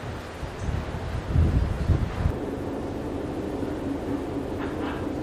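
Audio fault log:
Nothing stood out on listening.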